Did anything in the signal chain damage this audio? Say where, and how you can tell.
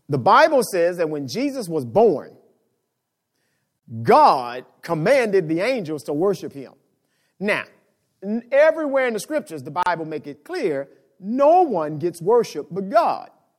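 Yes. Gap at a join of encoded pieces, at the codec stage: 35 and 34 ms silences at 3.79 s and 9.83 s (after "in the scriptures the"), six seconds apart, from untrimmed encoder delay and padding.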